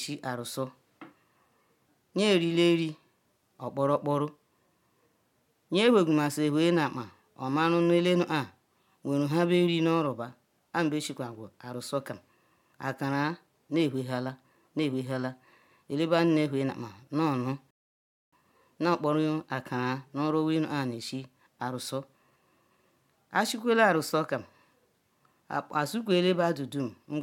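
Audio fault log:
17.71–18.33 s: rebuffering stall. The speech drops to silence for about 0.62 s while playback waits for data, then resumes exactly where it stopped, nothing skipped.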